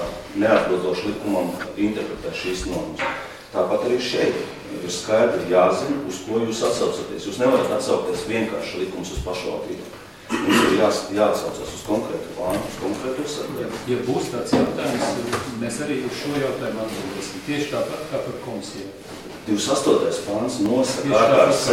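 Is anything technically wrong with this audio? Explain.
Yes. From 9.68 s to 21.66 s there are periodic USB or driver dropouts. Every 1.0 s, something blocks the audio path. About a millisecond of audio is lost and replaced by silence. There are roughly fifteen such gaps, heard as regular ticks wherever there is signal.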